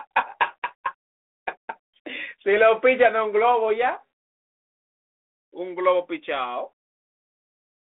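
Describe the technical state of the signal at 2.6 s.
At 2.6 s the speech is intact, with nothing beyond the narrow 300 Hz to 3.6 kHz telephone band and light granular hiss of its 32 kbit/s G.726 ADPCM coding.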